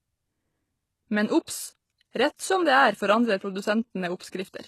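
Throughout the speech the treble has a gritty, metallic sheen, with s sounds turning lispy, which points to likely HE-AAC compression at a low bitrate around 16 kbps. The upper band is rebuilt from copied lower bands, so a spectrogram shows blocky, repeated harmonic patterns and nothing above 12.3 kHz.

From 1.45 to 1.48 s a pre-echo appears: a short hiss lasting about 32 ms arrives just before a sharp attack. The codec's noise, spread across the whole block, fills the quiet gap and softens the onset. On a spectrogram, a smear of broadband noise runs ahead of the transient.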